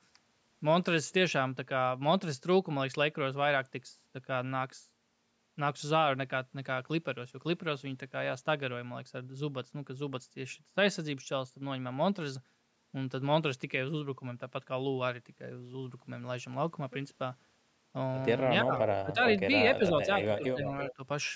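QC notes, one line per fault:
18.63–18.73 s, 19.01–19.2 s, 19.77–20.71 s and 20.96–21.0 s: speech suppressed in double talk. The far end's audio was likely playing on the loudspeaker while this talker spoke, and the echo canceller, unable to tell the local voice from its own loudspeaker echo, turned both down. The voice dips by about 20 dB in the first two spans and about 10 dB in the last two. Within the 19.77–20.71 s span only around 0.4 s in scattered pieces is pulled down.
20.22–20.4 s and 20.88–20.94 s: echo leak. The loudspeaker side's echo canceller likely failed to remove all of what its microphone picked up, so part of the played-out voice was sent back into the call. It is heard as a delayed copy of that voice arriving about 0.34 s late and about 15 dB below the speech, in short scraps that fall among the suppressed passages near the end.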